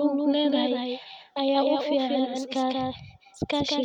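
From start to end, the speech carries a doubled audio track. A second, full-band copy trails about a fifth of a second behind, roughly 5 dB quieter. It has no decay or room tone. The likely cause is a slower second capture path.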